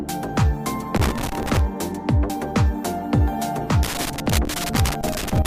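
A worn or dirty contact in the signal path, a loose connector crackle, keeps making and breaking as it shifts, chopping the signal. From 0.95 to 1.59 s this comes through as an irregular burst of crackle and scratching over the sound.

At 2.30 s the audio skips: roughly a tenth of a second is missing and the two sides are butted together with no silence. The likely cause is audio missing between chunks, with the processor dropping material while switching between blocks of about 2.5 s.

The loose connector crackle returns from 3.83 to 5.46 s, the same ragged scratching, now lasting to the very end.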